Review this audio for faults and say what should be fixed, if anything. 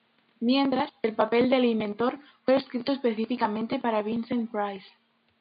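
Nothing needs fixing: the speech comes through without faults, and the room noise sits about 45 dB below it.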